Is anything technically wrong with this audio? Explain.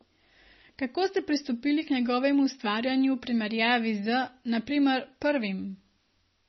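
Yes. MP3 compression runs throughout: nothing sounds above 5.9 kHz, and the speech has a heavy watery, swirling quality. This is likely a bit-starved MP3 encoder, consistent with about 24 kbps, cutting the treble and dropping weak frequency lines that flicker between frames.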